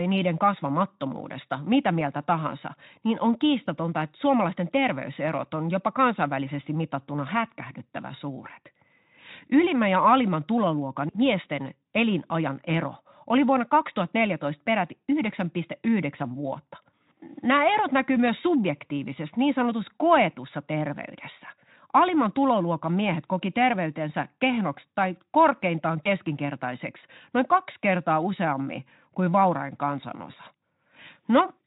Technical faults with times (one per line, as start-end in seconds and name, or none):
3.65-3.69 VoIP packet loss concealed by the speech codec
17.03-17.06 VoIP packet loss concealed by the speech codec
26.04-26.08 VoIP packet loss concealed by the speech codec
30.31-30.34 VoIP packet loss concealed by the speech codec